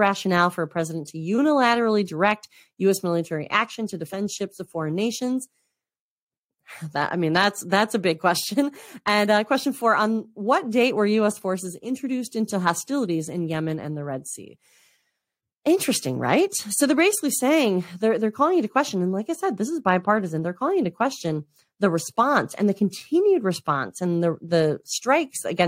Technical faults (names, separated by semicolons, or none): none